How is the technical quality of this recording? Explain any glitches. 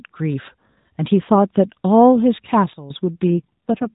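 The recording has a narrowband mobile-phone sound, with nothing above 4 kHz and light AMR narrowband codec colouring, and two glitches near the end.

From 2.73 to 2.90 s the sound and its background noise both fall abruptly by about 12 dB, then snap back up. This is a sudden gain jump, likely a digital gain setting applied from one sample to the next with no smoothing ramp, so everything shifts level at once.

From 3.30 s to the end the speech turns rougher, buzzier and more synthetic, with no gap and no change in bandwidth. This is an AMR rate drop, which fits a switch from 12.2 to 4.75 kbps. The vocal-tract model gets far fewer bits per frame, so detail is lost.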